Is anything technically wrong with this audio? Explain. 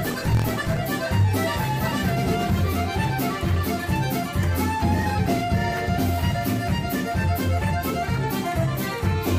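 Yes. From the start to about 0.82 s there's a block size mismatch (truncated). One stage hands over longer blocks than the next reads, so each block's tail gets dropped. You hear a 43.1 Hz buzz, which fits a 1024-sample read block, and the audio runs about 1.12 times fast at roughly normal pitch.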